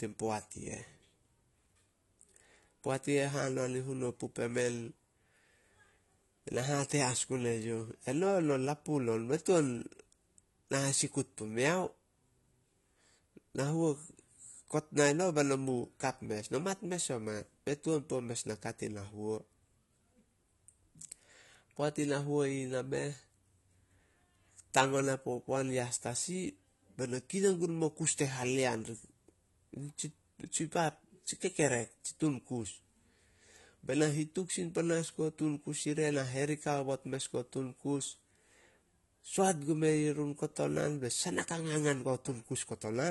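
AAC compression damage runs throughout this speech: nothing above about 11.6 kHz, with a dull, smeared, warbling texture, likely from AAC-LC coding at a low bitrate near 32 kbps.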